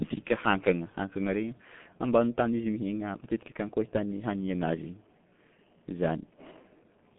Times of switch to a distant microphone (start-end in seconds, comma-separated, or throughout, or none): none